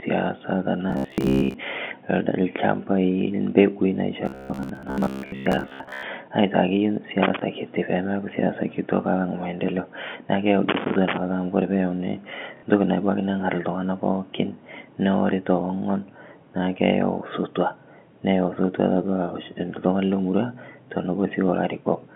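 Speech over a G.711 A-law telephone line, which holds the sound to roughly 200 Hz to 3.4 kHz, has three kinds of fault. The first is robotic sound from repeated short buffers. Here the audio likely arrived too late, so the playback software looped a short stretch of about 15 ms over and over and skipped most of the real signal. Between 0.89 and 1.57 s and again from 4.26 to 6.03 s, that looping lays a rigid metallic buzz at 66.8 Hz over the speech. The second is loose connector crackle. A contact in the signal path was making and breaking, chopping the signal, and this comes through as irregular bursts of scratchy crackle from 7.22 to 7.42 s and from 10.69 to 11.17 s. The third is packet loss with the last packet repeated. At 12.57 s about 60 ms of audio went missing, consistent with a couple of dropped packets, and the receiver filled the gap by replaying the last packet. The result is a brief buzzy stutter.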